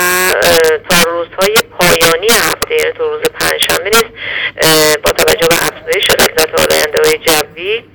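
From start to finish, integer overflow: with about 10 dB of overdrive, a few percent of samples exceed the integer ceiling and wrap to the opposite extreme instead of being limited. Loud peaks become harsh, violent cracks, seen as full-scale vertical jumps in the waveform and broadband streaks on a spectrogram.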